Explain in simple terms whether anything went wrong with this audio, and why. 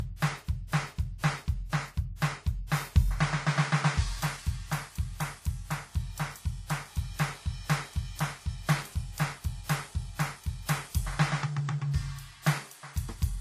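Yes: the music sounds like it was compressed more than once, likely transcoding between lossy codecs. Throughout, nothing is heard above 14.9 kHz, and two different kinds of compression artefacts sit on top of each other. A single compression pass would leave only one.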